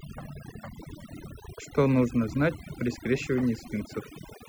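From start to finish, the recording shows overdone noise removal: a noise reduction stage set far too aggressively. It pulls individual frequency bands right down whenever their level sits close to its noise estimate, and the softer parts of the speech fall below that line and vanish with the noise. The pauses drop to near silence, scattered with twinkling, warbling specks.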